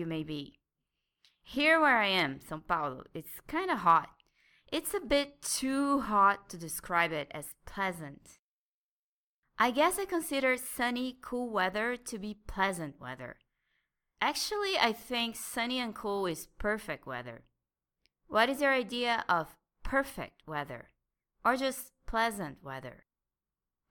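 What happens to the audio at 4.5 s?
Nothing goes wrong at 4.5 s; the speech carries on intact through that moment, with no dropout, click or other fault to be heard.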